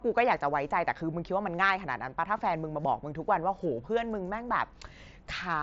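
Nothing stood out on listening to this speech clip, which comes through a Bluetooth mSBC headset link.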